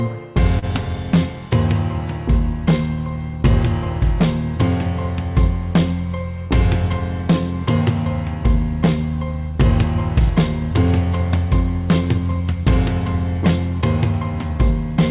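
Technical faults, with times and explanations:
0.59–0.65 s, short concealed packet loss: 30 ms of audio arrived too late. The decoder extended the preceding sound, so it comes across as a brief smear.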